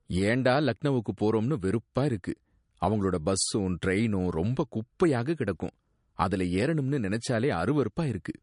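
Throughout the speech, nothing comes through above 10.6 kHz, and the sibilants have a swirly, watery quality with metallic chirps. That is plainly audible damage, likely from MP3 compression at a low bitrate, around 44 kbps. The encoder ran short of bits, cut the treble and let weak frequency components flicker between frames.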